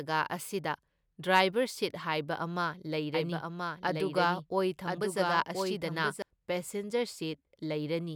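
From 3.14 s to 6.22 s the speech carries a doubled audio track: a second, full-band copy of the same speech runs roughly a second behind, some 5 dB quieter, with no reverberant tail or room colouring. It switches on and off abruptly at those points, most likely from a slower second capture path or an edit that left two copies overlapping. On a spectrogram the harmonic patterns repeat, shifted right by about a second, with hard vertical edges where the copy begins and ends.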